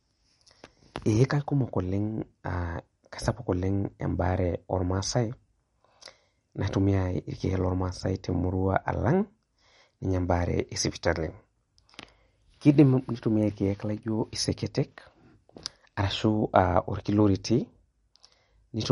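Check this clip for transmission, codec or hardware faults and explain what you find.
One codec fault runs through the whole recording. MP3 compression is the likely cause, apparently at a low bitrate around 48 kbps. The encoder, short of bits, cuts the treble at 11.2 kHz and drops weak frequency lines frame by frame, leaving the speech plainly watery and swirly, with chirpy s sounds and smeared attacks.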